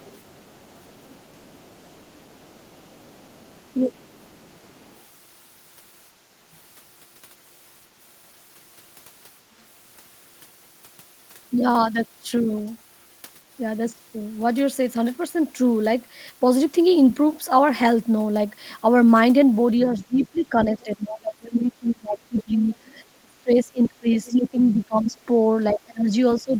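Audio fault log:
0.00–5.01 s, other side's voice leaking through: a faint second voice sits about 35 dB under the speech, likely residual loudspeaker echo. The spectrogram shows weak, separate harmonic traces beneath.
3.75–4.15 s, speech suppressed in double talk: the talker drops by up to about 15 dB for roughly 300 ms. This is likely the canceller ducking both voices during overlap, and the waveform envelope visibly pinches.
6.52–6.57 s, other side's voice leaking through: a brief scrap of the far voice, about 40 dB down, likely an uncancelled echo fragment. It is barely visible as a faint spectrogram smudge.
19.92 s to end, speech suppressed in double talk: the talker's level sinks, as much as about 25 dB, likely while both sides speak. The waveform shows the level dipping.
20.00–20.26 s, 22.39–22.43 s and 23.83–24.49 s, other side's voice leaking through: far-side bursts about 20, 20 and 15 dB below speech, likely echo escaping cancellation. 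They appear as overlapping harmonic stacks.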